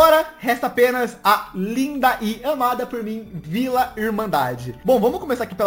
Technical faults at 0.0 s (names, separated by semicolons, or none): imaging from sample-and-hold upsampling